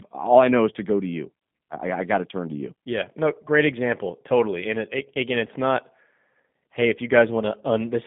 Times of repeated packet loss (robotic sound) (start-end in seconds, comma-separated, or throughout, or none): none